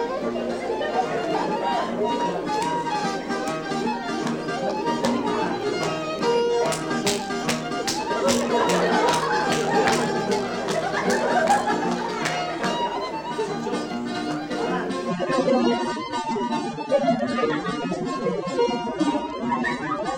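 At 15.08 s the audio drops abruptly, with no gap, to a lower-bitrate rendition of the adaptive stream, a switch that points to AAC at roughly 24 kbit/s instead of 96. Codec artefacts rise through the end.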